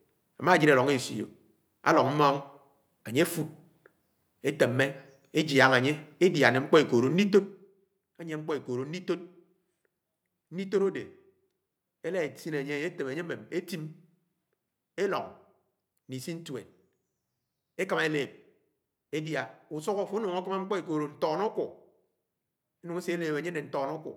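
Nothing in the speech stood out as a technical problem on listening.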